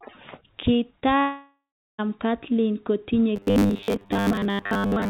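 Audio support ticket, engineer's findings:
Short concealed packet loss at 1.00–1.03 s: quick smear where about 20 ms never made it to the decoder. The receiver stretched the last bit of sound over the hole, then blended back in, so a small detail could get swallowed.

Long network dropout, 1.19–2.00 s: nothing arrives for about 0.8 s. The receiver keeps the last sound going as a fading buzz or hiss, then leaves near-silence for around 0.39 s before the speech picks up again, minus the chunk that got lost. Likely a network gap.

Robotic sound from repeated short buffers, 3.36 s to the end: metallic buzz pinned at 100 Hz that still loosely tracks the speech. That fits a 10 ms block being replayed over and over while most of the real audio gets skipped, likely buffer starvation. The call path's band limit at 4 kHz, which points to G.711 A-law, applies throughout.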